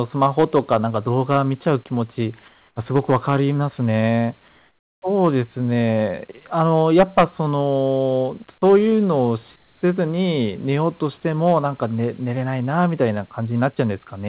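Speech heard through a narrowband call link, with nothing above 4 kHz, which fits G.711 mu-law. Hard clipping flattens the peaks at 0.22–1.73 s, 2.96–3.36 s, 5.24–5.28 s, 6.60–7.24 s and 11.47–11.58 s. The overload is about 2 to 5 dB in most places and about 9 dB at 6.60 s, where the fuzz is harshest. The crackle comes and goes with the loudest syllables and adds grit right up to the band edge. That sets it apart from codec coding noise, which follows the speech level throughout rather than bursting only on the peaks. In the pauses at 2.48–2.76 s, 4.48–5.02 s and 9.56–9.82 s, the real background gives way to comfort noise: a smooth, featureless hiss about 4 dB quieter in the first two gaps and about 7 dB quieter in the third. The likely cause is discontinuous transmission, with the receiver filling the pause with synthetic noise. Unlike a noise gate, the pause never drops to silence, and the room detail returns only when speech resumes.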